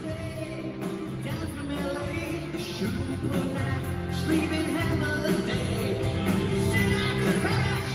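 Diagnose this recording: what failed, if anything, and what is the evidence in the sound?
At 2.53 to 2.55 s the sound jumps abruptly forward, with no silence or fill at the join: one moment runs straight into material that should have come noticeably later, and roughly 0.4 s of audio is simply gone. This is a skip ahead at the network and jitter-buffer stage: a stretch of packets was dropped while later audio was already queued, so playback resumed from the newer data, cutting the delay by about that same 0.4 s.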